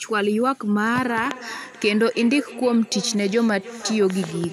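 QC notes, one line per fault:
0.89 s to the end, feedback echo between two devices: the speech returns roughly every 0.3 s, peaking about 16 dB below the direct sound, because a second device in the room replays the call and this microphone re-captures it, beyond its own echo canceller's reach.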